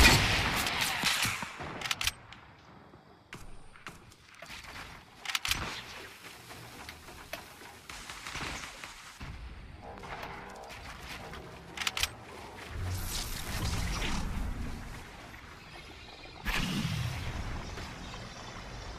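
No technical faults detected.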